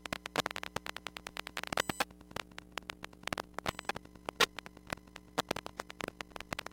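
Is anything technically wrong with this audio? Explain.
Yes. From 2.3 s to the end, the sound takes on a fast, rough flutter, a robotic tremolo pulsing around 50 times a second. This is overlap-add ripple: windowed frames were rejoined with overlaps that don't sum evenly, so the level dips about 11 dB once per frame.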